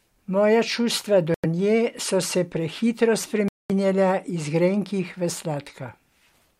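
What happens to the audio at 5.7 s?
At 5.7 s the speech runs through without any audible fault; the audio is intact at that point.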